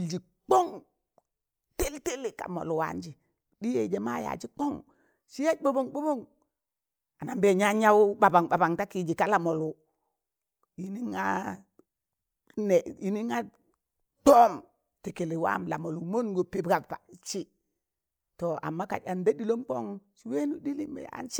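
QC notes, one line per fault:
No faults found in this speech recording. Nothing here calls for a QC entry.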